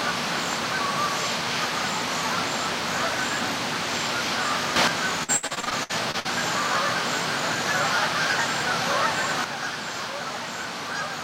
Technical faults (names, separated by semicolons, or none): sudden gain jump; repeated packet loss (robotic sound)